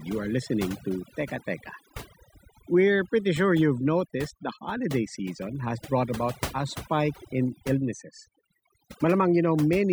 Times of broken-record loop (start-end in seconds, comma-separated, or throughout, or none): none